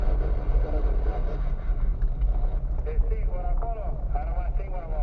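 No technical faults can be heard anywhere here.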